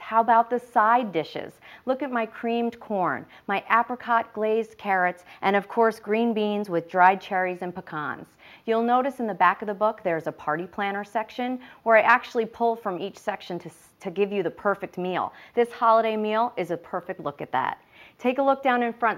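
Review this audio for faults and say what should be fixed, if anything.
Nothing in the audio needs to be fixed. No problems turn up anywhere in the recording, so no correction is called for.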